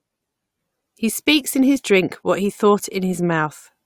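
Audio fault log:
No technical faults can be heard anywhere in the speech signal.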